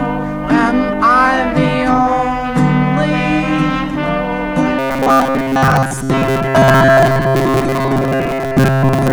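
From 4.79 s to the end at 9.12 s the music takes on a robotic sound from repeated short buffers, a rigid metallic buzz near 134 Hz, likely from a roughly 7.5 ms chunk looping while most incoming audio is skipped. A spectrogram shows evenly spaced harmonic lines; the waveform shows identical repeating cycles.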